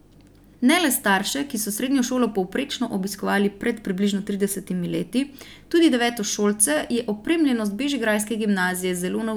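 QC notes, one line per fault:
No technical faults can be heard anywhere in the speech recording.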